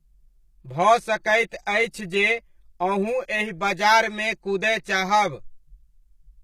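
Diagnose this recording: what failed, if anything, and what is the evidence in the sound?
The speech sounds hollow and phasey from start to finish, with fixed notches that do not move as the voice changes. This is channel delay (comb filtering): one channel arrives roughly 5 ms behind the other, and folding the pair to mono cancels the shared content at evenly spaced frequencies, starting around 100 Hz and repeating up the spectrum. The stage is the driver or buffer, since an offset of that size points to a short buffer misalignment between channels.

Codec damage is plainly audible throughout. The upper band sounds synthetic rather than natural, and sibilants come out gritty and lispy because the treble does not line up harmonically with the lower voice. This most likely comes from HE-AAC compression, which codes only the lower spectrum and rebuilds the top by copying lower bands upward under a coarse envelope. 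The degree of damage fits a low bitrate of around 20 kbps, placing the fault at the codec stage.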